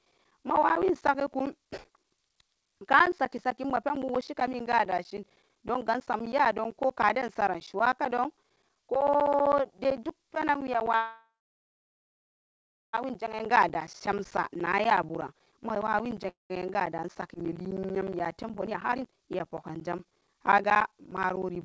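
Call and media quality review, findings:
Periodic USB or driver dropouts: regular ticks every 64 ms from 0.05 s to the end, audible only under speech. Host USB bus or audio driver blocked on a fixed schedule; brief sample losses replaced by silence, fixed spacing pointing to a periodic background task.

Call audio freeze: speech stalls 10.96–12.95 s, with the last sound smeared into a fading buzz, then about 1.6 s of silence. A shorter repeat at 16.29–16.51 s, about 0.16 s silent. Likely jitter buffer underrun from delayed packets. Playback resumes where it stopped, with nothing lost, adding roughly 2 s and 0.2 s of delay.

Jitter buffer speed-up: speech hurried at unchanged pitch, 13.05–16.26 s at about 106% speed, then 16.69–21.17 s at about 120%. The receiver is draining excess buffered delay by cutting short pitch-period segments repeatedly, removing roughly 0.2 s and then about a second.

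Skip ahead: abrupt forward jump at 17.35–17.37 s, joined almost directly with a tiny gap. Roughly a second of speech is missing. Caused by audio dropped in transit or discarded on buffer overflow while later packets were queued, removing the accumulated delay at once. Band-limited to 8 kHz throughout, consistent with G.722 wideband coding on the call path.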